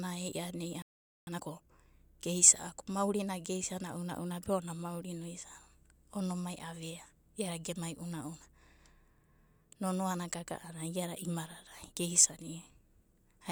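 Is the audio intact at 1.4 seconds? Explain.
No. From 1.27 to 1.71 s, time-compressed catch-up runs at 2.0x: cross-faded cuts hurry the speech at unchanged pitch. Spectrogram shows squeezed syllables, level harmonics.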